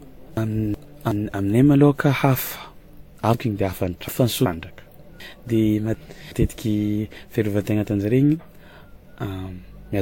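Transcoding between lossy codecs runs throughout: nothing sounds above 16.6 kHz, and two layers of artefacts stack up and are heard together, likely from WMA followed by Vorbis. Chunks out of order occur at 0.37–1.12 s, 3.34–4.46 s and 5.20–6.32 s. A 0.37 s block plays late, displaced by one chunk in the first case and two in the others. Each produces a jumbled moment.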